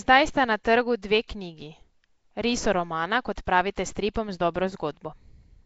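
Throughout the speech, the sound has a rough, hissy halo and a smeared, underwater quality. Nothing is present above about 7.7 kHz. The likely cause is Nellymoser compression, the old Flash microphone codec. It codes short blocks at a fixed bit budget. Weak bands get no bits and are filled with noise instead, which makes the hiss. The damage is plainly audible. The coarse texture points to a rate of around 32 kbps.

At 3.36 s a sharp attack is preceded by a brief hiss, and the onset sounds soft and smeared. This is pre-echo. The codec spreads its quantisation noise across a whole block. The noise sized for the loud attack also fills the quiet moment just before it. Here the smear lasts 16 ms. It happens again at 4.14 s, spreading 15 ms ahead of the attack.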